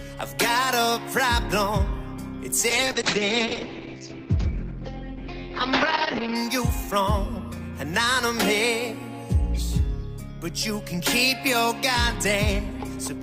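From 2.71 s to about 6.41 s there's a call bitrate drop. The bandwidth estimate fell, so the encoder got squeezed, and the sound points to roughly 32 kbps falling to around 8 kbps. For about 3.6 s it sits at that floor, where the top end is chopped from 20 kHz down to 8 kHz. You hear it go muffled and rough and watery, coarser coding throughout, until the rate climbs back.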